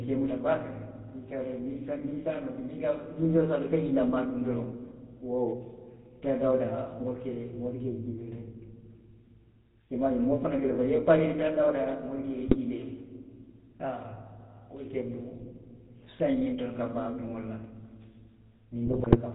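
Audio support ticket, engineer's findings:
Buzzy, gravelly roughness on speech for the whole clip, nothing above 4 kHz. GSM full-rate codec, consistent with 13 kbps: vocal-tract model driven by regular pulses, only every third excitation sample kept, so harmonics turn rasping and the top end is cut.

Squawks, pops and gargling at 12.48–12.57 s and again at 18.85–19.17 s. GSM bit errors: flipped bits corrupting filter, pitch or gain values, warping the spectrum or spiking the level per frame. Lengths fit about four and fifteen damaged 20 ms frames.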